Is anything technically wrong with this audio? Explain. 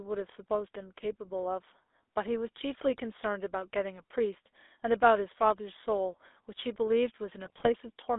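Yes. The speech has been through the GSM full-rate codec for the whole clip. The band is held to roughly 300 Hz to 3.6 kHz, and the plainly audible buzzy, gravelly roughness fits the 13 kbps full-rate coder. That coder rebuilds the voice from a vocal-tract filter driven by a coarse, regularly spaced pulse excitation, so fine detail in the voice is replaced by that harsh texture.

From 7.44 to 7.68 s there are GSM bit errors. Corrupted filter, pitch and gain parameters reach the decoder, and each affected frame comes out with a bent spectrum or a jump in level. This quarter-second burst sounds like squawks, pops and gargling, which points to around a dozen damaged frames at an error rate of a few percent.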